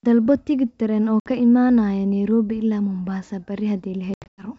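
Packet loss on an ADPCM call, carried over wideband G.722 coding whose full-rate clarity shows no audible strain, dropped a few packets at 1.21 s, between "tigidh tareen oo" and "ka imanaya", leaving a hard-edged 60 ms hole. The decoder's predictor and step size then resume out of step with the sender's, so the speech returns slightly distorted. From 4.14 to 4.46 s about ten packets drop in scattered runs, the longest 100 ms, chopping the sound repeatedly.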